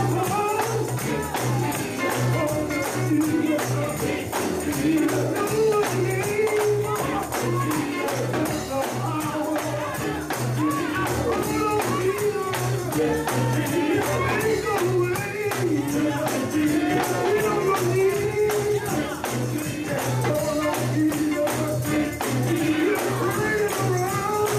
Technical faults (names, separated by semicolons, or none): none